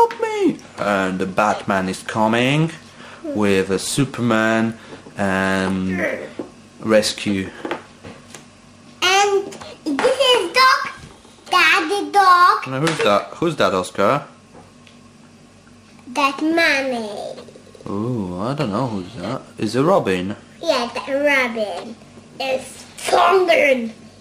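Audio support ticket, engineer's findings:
No audible faults found; nothing to escalate.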